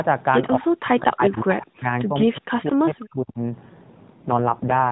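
From 0.57 to 1.89 s the sound dips sharply and breaks into pieces, with the deepest cuts around 40 dB down and about a second of the stretch affected in total. This is speech suppressed in double talk. The likely cause is an echo canceller that could not tell its own talker from loudspeaker echo while the far side was speaking, so it turned everything down.

Inside that stretch, at 1.33 to 1.42 s, a faint delayed copy of the sound surfaces about 25 dB below the main level and trailing it by 220 ms. This is an echo leak. The far end is likely on a loudspeaker, and its echo canceller let part of what its microphone picked up return down the line.

The same pumping and breakup returns from 2.05 to 3.39 s. Again the level plunges by as much as around 40 dB, and the fragments add up to about a second. Two more echo leaks sit inside it, with the same 190 ms lag each time. The first, from 2.21 to 2.39 s, is about 25 dB down. 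The second, from 2.65 to 2.71 s, is stronger at about 20 dB down.

From 4.14 s to the end at 4.91 s the sound turns rougher, buzzier and more synthetic. The bandwidth does not change and nothing drops out. This is an AMR rate drop. The roughness fits the narrowband AMR codec falling from 12.2 to 4.75 kbps, as a weak radio link shifts bits toward error protection and away from the speech itself.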